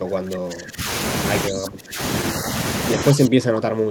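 Speech that drops by up to about 25 dB at 0.00–0.85 s, 1.49–1.99 s and 2.97 s to the end, likely speech suppressed in double talk; the waveform visibly shrinks there.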